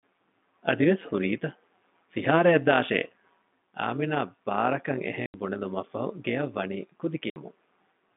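Overlap-add ripple runs through the whole speech clip. Frames were rejoined with uneven overlap, so the level pulses by about 11 dB around 150 times a second, giving a rough, robotic buzz.

Packet loss filled with silence hits at 5.26 to 5.34 s, after "އާމިނާ ބާރަކަށް". The 80 ms gap fits four lost 20 ms packets. It is a hard-edged dropout. A second 60 ms hole follows at 7.30 to 7.36 s, after "ބުނެލުމަށްފަހު ގެއަށް ވަނީ ކުދި".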